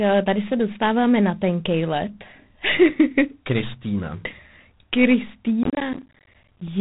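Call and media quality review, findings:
G.726 ADPCM, 24 kbit/s, entire clip. Harsh, rasping hiss riding on the speech and swelling and fading with its level. No content above 3.8 kHz. Probable component: narrowband ADPCM leg (DECT-style path) run below its usual 32 kbit/s, so the coarser prediction-error coding leaves more quantisation noise. Distinct from background noise: it is not present as a steady floor but tracks the speech level.

Processor overload crackle, 5.63–6.68 s. Dense gritty crackle and tearing over the last second. Probable component: audio processing thread overloaded. Many buffers are missed repeatedly, each leaving a short hard-edged silent gap, consistent with buffers of about 10 ms and several dozen misses. Distinct from network packet loss: the gaps come from missed processing deadlines and stop when the load passes.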